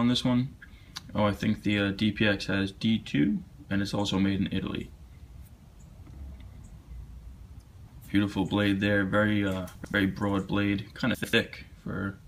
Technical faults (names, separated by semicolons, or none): chunks out of order